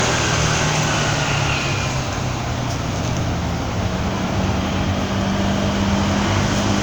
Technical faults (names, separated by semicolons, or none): generation loss